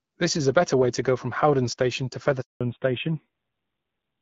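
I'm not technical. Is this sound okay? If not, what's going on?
No. A handover gap cuts in at 2.41 s and lasts until 2.61 s, about a fifth of a second. The call was being passed from one network connection to another, and during that switch no pieces of speech got through. The speech fades out almost instantly, there is a short stretch of silence, and whatever was said in that moment is simply missing.

Right after that, at 2.61 s, comes a fallback to narrowband that lasts to the end of the clip. Up to then the call was in HD Voice, which carries the crisp upper range of the speech. When the new connection took over, it switched to an older, lower-quality phone format that discards everything above 4 kHz. From 2.61 s on, the speech sounds duller and rougher, like an old landline.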